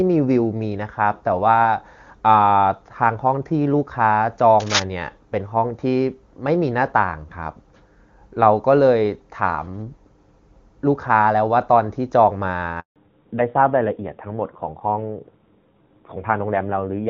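Cable scratch noise at 4.59 to 4.84 s: a quarter-second burst of dense, ragged scratching and rustling cuts across this speech recording at about the same level as the talker. The uneven, crackly texture points to a worn cable, connector or control being moved, its contact resistance jumping rapidly and injecting noise, though this is likely rather than certain from the sound alone. Handover gap at 12.80 to 12.96 s: the voice fades out over a few tens of milliseconds and the line goes silent for 160 ms, which fits the call being passed from one network to another with no speech frames arriving during the switch, so whatever was said in that window is simply missing. Fallback to narrowband from 12.96 s to the end: when the audio resumes, nothing above 4 kHz remains, and the voice sounds duller, boxier and rougher. The bright, airy top that the HD Voice wideband codec carried before the gap disappears, consistent with the call dropping from AMR-WB at a rate around 23.85 kbit/s to the older AMR-NB codec at about 7.4 kbit/s.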